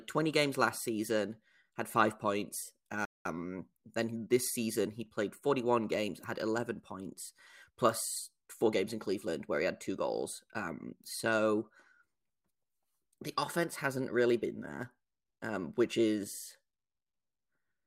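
At 3.05 s the speech cuts to silence mid-flow and stays silent until 3.25 s, a gap of about 200 ms. This is a playback stall: the player most likely ran short of data or was blocked, so output halted before recovering.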